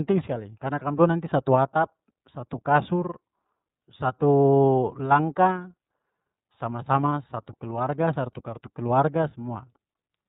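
From start to finish the speech carries plainly audible iLBC codec damage. Nothing above 4 kHz survives, and each short block is coded on its own, without borrowing from the block before, so the voice sounds slightly rough and synthetic. That fits the 13.33 kbps mode with 30 ms frames. A simple low-pass filter would also dull the top end, but it wouldn't add this frame-by-frame graininess to the speech itself.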